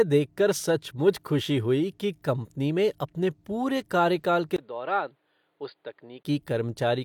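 Right after "में अपने पूरे कार्यकाल", at 4.56 s, the speech turns dull and boxy, with a 20 ms gap at the change, a level drop of about 10 dB and a new background noise about 40 dB below the speech. Nothing above 4.8 kHz remains until 6.25 s. The likely cause is the input switched to a poorer device, whose narrower band, different tone and own noise replace the original microphone's for that stretch.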